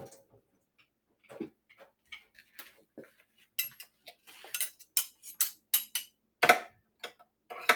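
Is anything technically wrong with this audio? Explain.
Yes. A noise suppressor meant for speech was applied to these sounds, treating steady tones and tails as noise, so levels swing by roughly 10 dB and pump, flutter or thin out throughout.

The sound gets cut by the noise suppressor at 0.15–1.31, 1.5–3.58, 3.83–4.29, 4.78–4.95, 6.07–6.37 and 6.69–7.48 s. Held parts sink by up to about 20 dB while sudden hits mostly survive.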